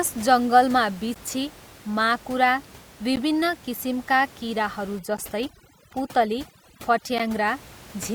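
At 1.14 s and 3.16 s, a gap between chunks leaves a 13 ms hard-edged hole every 2 s, visible as clean vertical blank stripes in the spectrogram and flatline notches in the waveform.

From 4.99 to 7.48 s, overdone noise removal strips bands near the noise estimate. The room noise, about 22 dB below the speech, drops to twinkling specks, with patchy holes across the spectrogram.

The same chunk gaps recur inside this stretch at 5.17 s and 7.18 s.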